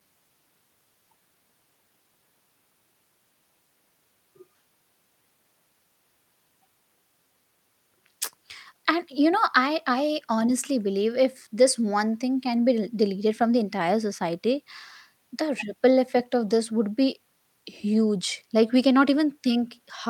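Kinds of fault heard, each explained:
No technical faults can be heard anywhere in this speech recording. There is nothing to explain for any kind of fault.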